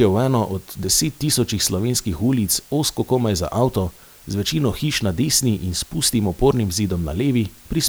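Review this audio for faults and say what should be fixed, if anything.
Low bit depth with dither throughout: 8-bit speech whose dithered rounding leaves steady hiss about 30 dB down, seen as a flat, even floor across the whole spectrogram. To prevent it, record and export at 16 or 24 bits, and reduce word length only once, at the final delivery stage.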